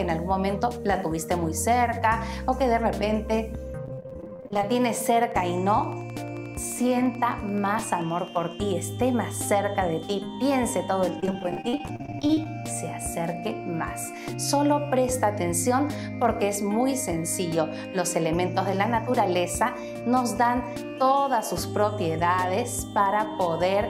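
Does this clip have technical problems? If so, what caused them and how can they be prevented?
Yes. Between 3.85 and 4.64 s, and again from 11.20 to 12.46 s, the sound turns choppy and robotic, the result of repeated packet loss: gaps of up to 40 ms arrive in quick succession, each patched by stretching the previous sound, covering about 44% and 32% of those spans. A jitter buffer with adequate depth and a more stable network path would prevent it.

From 4.89 to 8.37 s a regular train of clicks ticks over the sound at about 11.5 per second, roughly forty in all, peaking near the level of the sound itself; the likely cause is electrical interference or a faulty connection or power supply. Shielded, grounded cabling and a reliable interface connection would prevent it.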